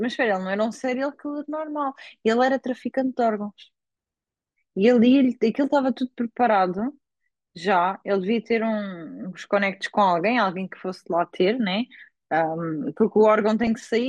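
Throughout the clip the speech sounds dull and plainly gurgling, with a granular roughness. This is likely MP2 compression at a starved rate, fitting roughly 80 kbps: upper sub-bands switch off and flicker, showing on a spectrogram as a ragged, blocky ceiling with patchy high-frequency bands.

From 13.63 to 13.67 s comes DAB burbling, a brief burst of burbling near the very end. Bit errors slipped past error correction and corrupted the audio data across a handful of frames, putting short blips of noise in single sub-bands. A spectrogram shows isolated bright specks in single bands; the waveform shows a short irregular bulge.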